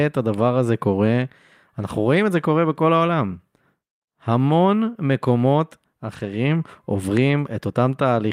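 From 6.15 to 6.33 s, a lost packet was rebuilt from error correction. Packets went missing, and the decoder filled about 100 ms from low-bitrate backup copies carried in the following packets. The speech runs on without a gap but turns briefly rougher and noisier.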